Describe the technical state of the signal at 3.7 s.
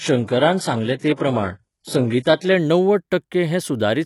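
At 3.7 s the speech signal is intact, with no audible dropout, distortion, noise burst or other technical fault at that point.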